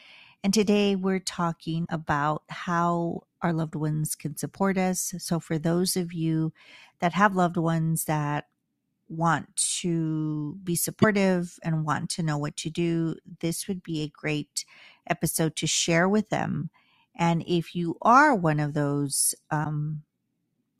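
A broken MP3 bit reservoir is the likely cause of four short disturbances in the speech, at 1.84–1.87 s, 3.18–3.21 s, 11.01–11.04 s and 19.63–19.66 s. Where frames were lost, the next frame reached back for its borrowed bits and decoded bytes belonging to a different frame. Each glitch lasts about one 26.1 ms frame, a brief corrupted blip as the audio jumps ahead.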